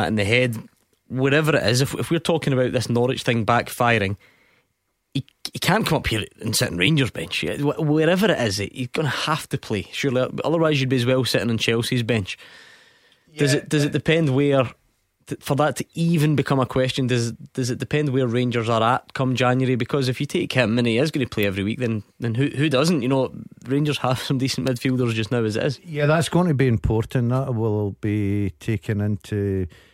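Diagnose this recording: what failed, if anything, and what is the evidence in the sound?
Electrical switching spikes at 21.43 s and 24.67 s: two sharp snaps over the speech, peaking around -15 dBFS and -10 dBFS. This is an analogue wiring fault, likely a nearby switch or motor arcing briefly and coupling into the audio line.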